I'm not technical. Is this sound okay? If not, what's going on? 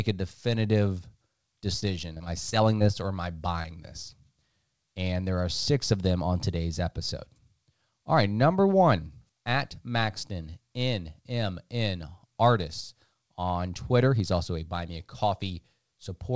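No. There are two problems, both from the call connection dropping bits of audio.

From 1.80 to 2.82 s there is repeated packet loss, which gives a robotic sound. Six tiny chunks of the speech went missing, each no longer than about a fortieth of a second. The receiving end filled each hole by stretching the last sound. That makes this stretch sound choppy, with pieces missing.

At about 3.62 s there is one short concealed packet loss. About a fiftieth of a second never arrived. The receiving end patched it the same way, so you may hear a brief smear or wobble there, or a short sound may drop out.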